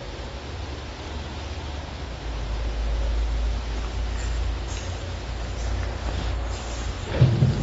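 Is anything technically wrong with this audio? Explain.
Yes, the whole clip is dull and smeared, with nothing above 7.6 kHz and a fizzy, warbling edge. That's likely AAC compression, consistent with a starved bitrate around 24 kbps.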